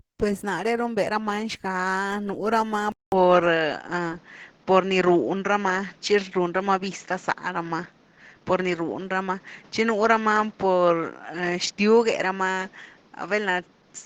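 Throughout, the speech sounds grainy and hoarse, a plainly audible degradation likely caused by Opus compression at 16 kbps, running in its hybrid speech mode. At 2.92 s, after a 200 ms silence, the sound turns duller with nothing above 7.3 kHz, a modest level shift and new faint background noise, likely an input switched to a poorer device, lasting to the end.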